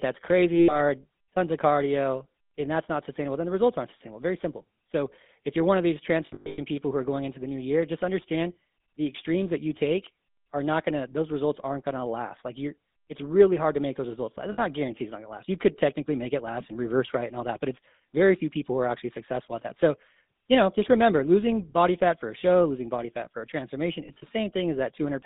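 Throughout, the speech passes through a GSM full-rate codec. The sound fits a 13 kbps GSM full-rate stream. The band runs from 200 Hz to 3.7 kHz. The voice carries plainly audible buzzy, gravelly roughness from the coarse pulse excitation.

Lost GSM frames occur at 0.56 to 0.76 s, 6.26 to 6.59 s, 14.52 to 14.61 s, and 24.06 to 24.23 s. The decoder repeats the last good frame, so the sound turns into a rough metallic ring. The loss at 6.26 s is scattered, totalling 280 ms.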